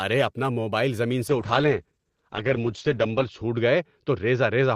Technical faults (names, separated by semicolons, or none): call bitrate drop